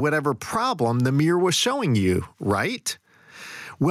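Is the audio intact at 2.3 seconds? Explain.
No, not really. Gain pumping runs through the whole clip, 2.3 s included. The level ducks by around 10 dB under each loud syllable, likely from gain set far too high with a fast limiter clamping down, leaving the speech squashed.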